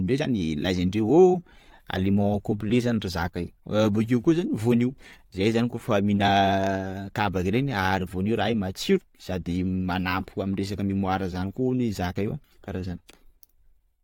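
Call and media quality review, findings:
No audible faults found in this speech recording.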